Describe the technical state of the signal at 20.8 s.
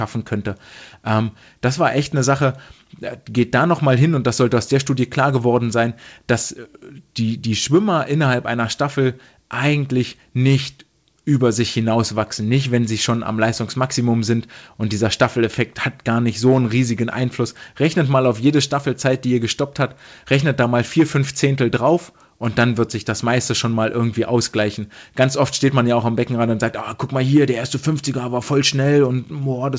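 At 20.8 s the audio is intact, with the speech passing cleanly through the call path's wideband codec, which leaves nothing above 8 kHz.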